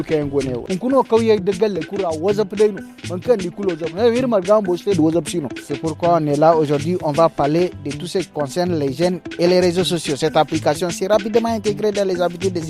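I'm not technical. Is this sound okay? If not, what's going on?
Yes, this sound is okay, and nothing is going on that needs fixing.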